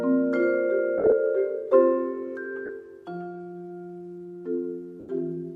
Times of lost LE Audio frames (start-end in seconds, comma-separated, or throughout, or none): 0.98-1.12, 2.66-2.69, 5.00-5.09